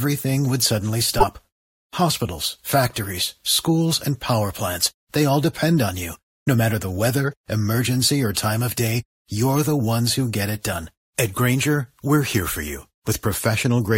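At 1.17 to 1.24 s there's a case of compressed frames skipped. A chunk of the speech, around 50 ms, simply never gets played, because those frames were missing or thrown out by the decoder as damaged. The audio jumps forward at the join. The same thing happens again at 10.69 to 10.74 s with a shorter jump of about 20 ms.

In between, at 6.13 to 6.16 s, there's a corrupt frame decoded. Here one damaged frame went through the decoder anyway instead of being dropped. Flipped bits scrambled its gains and codes, so energy lands at frequencies it shouldn't, for roughly the span of that one frame. You hear it as a short glitch peaking around -30 dBFS.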